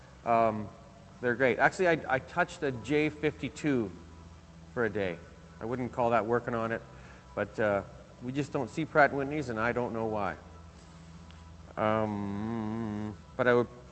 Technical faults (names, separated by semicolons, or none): none